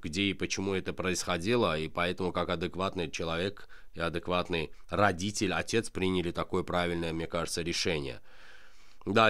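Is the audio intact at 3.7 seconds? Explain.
Yes, the audio is intact at 3.7 seconds, with no audible fault at that moment.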